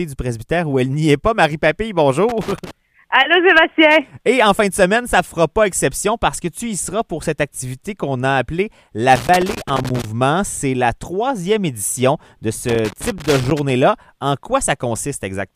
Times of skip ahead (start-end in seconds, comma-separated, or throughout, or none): none